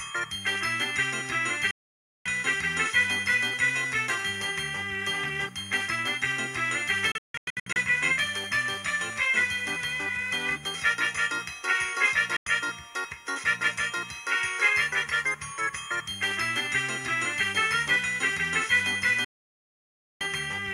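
Digital broadcast dropouts occur at 1.71 to 2.26 s, 7.12 to 7.76 s (several short holes), 12.36 to 12.47 s and 19.24 to 20.21 s. Each time the receiver muted on lost frames, cutting the sound abruptly to silence.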